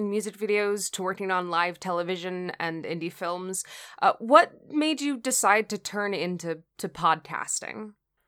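Listening through the speech, nothing stood out as a technical problem at any point.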